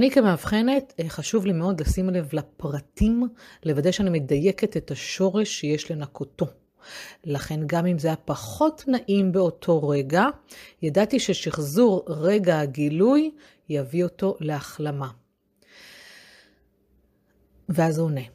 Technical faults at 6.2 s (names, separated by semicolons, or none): none